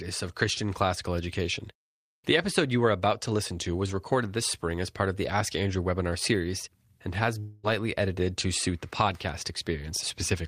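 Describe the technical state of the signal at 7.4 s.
A likely long network dropout cut off incoming audio from 7.39 to 7.66 s. After "webinar series and has", the receiver fills the gap with a fading buzz instead of silence.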